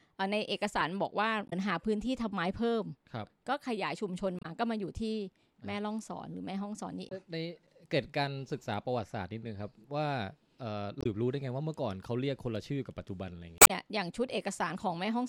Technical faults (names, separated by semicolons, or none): damaged data in a compressed stream